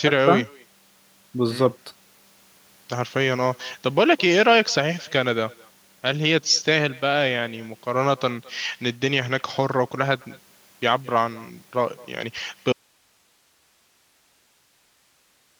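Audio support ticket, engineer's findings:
Echo with no canceller, whole clip. Speech shadowed by a quieter, thinner copy around a fifth of a second later, about 25 dB down. Far-end loudspeaker feeding its mic, no AEC removing it. Spectrogram: faint delayed ghost trailing each syllable.

Audio dropout to a faint residue, 12.73 s to end. Speech cuts abruptly, leaving only hiss roughly 40 dB below signal. Likely upstream signal loss with the downstream path still live. Waveform: sudden collapse to a thin noise floor. Spectrogram: uniform broadband haze, no speech structure.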